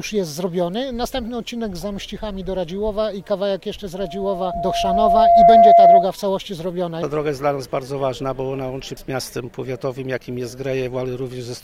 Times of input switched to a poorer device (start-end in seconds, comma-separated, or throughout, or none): none